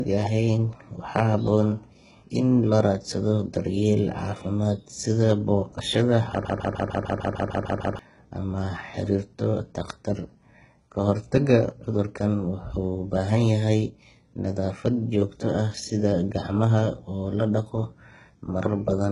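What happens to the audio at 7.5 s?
At 7.5 s the speech is stuck in a broken-record loop running from 6.45 s to 7.99 s. A 150 ms fragment repeats back to back about ten times, and whatever should have played in that second and a half is gone. The likely cause is a player, encoder or stream that stalled and kept resending its last buffered piece. Unlike a stutter or echo, every repeat is identical and the loop never decays or moves forward.

Under the loop, as across the whole clip, there is heavy HE-AAC compression. The upper spectrum is likely rebuilt by spectral band replication from copied lower bands, so s sounds come out gritty and metallic, with nothing above 11 kHz. That points to a very low bitrate, around 12 kbps. Unlike a plain low-pass filter, the treble does not simply disappear. It is still there but synthetic, and its harmonics don't line up with the lower band.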